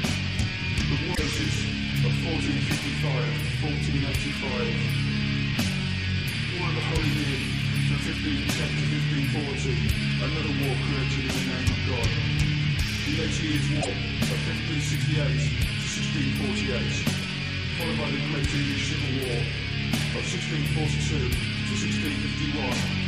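Damaged data in a compressed stream occurs at 1.11 to 1.19 s and again at 13.78 to 13.88 s. Corrupted bytes left the decoder misreading frames and losing sync until it found the next header, producing a short glitch of under a tenth of a second each time.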